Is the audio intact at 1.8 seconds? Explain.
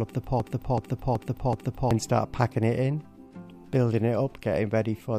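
No. From 0.40 to 1.91 s a broken-record loop is playing, likely because the player or stream stalled and kept resending its last buffered fragment. A 0.38 s piece repeats back to back four times, so the audio that belonged there, including 1.8 s, is lost.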